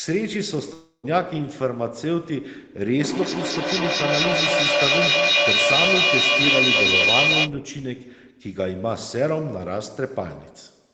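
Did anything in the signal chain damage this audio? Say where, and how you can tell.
Yes. From 0.73 to 1.05 s the sound stops arriving. What was playing smears into a fading buzz for most of that gap, then drops to a short silence before resuming with part of the sound gone. This is likely a long network dropout, with the receiver concealing lost packets.

From 2.86 to 7.56 s a feedback howl builds, a narrow tone around 2 kHz with a loop delay of roughly a fifth of a second, and peaks about 6 dB above the speech. A microphone is picking up a loudspeaker on the same call, and each trip around that acoustic loop adds gain.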